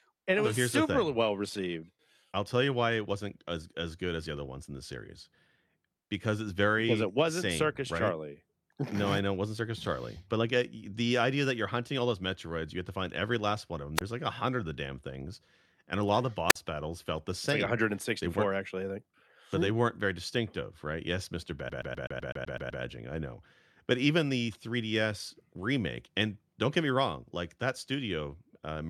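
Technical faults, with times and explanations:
0.00 to 2.0 s, adaptive stream starting at a low bitrate: the opening sounds dull and watery, with thin, synthetic-sounding treble and swirly codec artefacts. Just before "I'll tell you why" the quality jumps up cleanly with no gap, which fits a player opening on a low HE-AAC stream of around 32 kbit/s and switching to a fuller AAC-LC stream near 96 kbit/s once it had measured the connection.
13.96 s and 16.49 s, wireless microphone squelch dropout: each brings a quick lift of hiss followed by a short hole of near silence, about 22 ms at 13.96 s and about 48 ms at 16.49 s, between "a lot of the" and "battles felt the same". The radio link from an analogue FM microphone faded far enough that the receiver's squelch gate muted the output until the signal came back.
21.69 to 22.83 s, CD stuck on one turn: a rapid, mechanical stutter in which one fragment of about 126 ms plays nine times over, each pass clipped by a tiny mute at the jump, before the audio continues with "I know but even". 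A scratch was throwing the laser back one track at the same spot on each rotation, so the player kept replaying the same sliver of audio.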